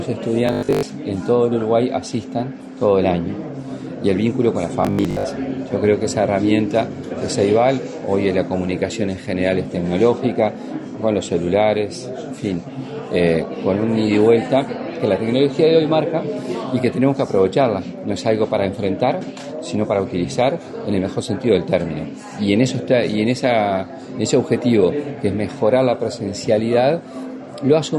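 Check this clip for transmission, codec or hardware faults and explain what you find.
Two short faults are present, both robotic sound from repeated short buffers. From 0.47 to 0.83 s and again from 4.83 to 5.25 s, the sound turns into a rigid, metallic buzz pitched at 50 Hz. The likely cause is audio arriving too seldom, so playback loops the last 20 ms or so while most of the real signal in those spans is skipped. That fixed repeat length imposes the 50 Hz pitch.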